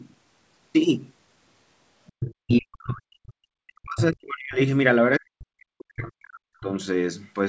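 Other side's voice leaking through at 2.07–2.34 s: a second voice, about 10 dB under the talker, is likely loudspeaker echo the canceller left in the microphone signal.

Speech suppressed in double talk from 2.4 to 4.59 s: the talker's voice sinks by up to roughly 40 dB. The likely cause is the canceller turning down both sides while they overlap.

Within that stretch, at 2.51–2.59 s, the leaking voice returns as a short scrap, only about 5 dB below the speech.

A second suppression runs from 5.18 to 6.72 s, with the same deep dips. Inside it, at 6.04–6.09 s, a brief, quieter fragment, likely echo, slips through.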